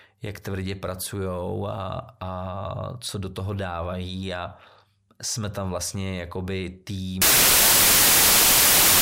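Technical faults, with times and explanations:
7.22–9.02 s, samples built from the wrong bytes: bytes are misassembled, so low-order bits dominate each value, turning the speech into loud, harsh broadband noise until the end.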